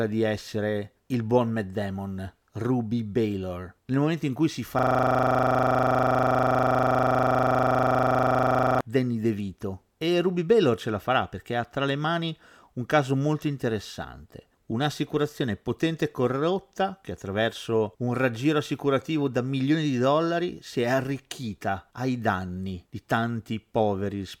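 From 4.79 to 8.81 s, a system hang loop repeats one 40 ms slice of speech at 25 Hz, a rigid buzz from a frozen driver replaying its ring buffer, unlike varying dropout stutter.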